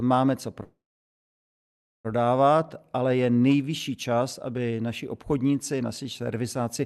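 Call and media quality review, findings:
Call audio freeze, 0.63–2.07 s: packet delivery likely stalled and the jitter buffer ran dry. Receiver extended the last sound as a short fading buzz, then about 1.29 s of silence. Playback resumed where it stopped, so a 1.41 s gap was inserted with nothing lost and all later audio was shifted. Background coding noise and the top end rolling off near 12 kHz fit Opus at around 48 kbps.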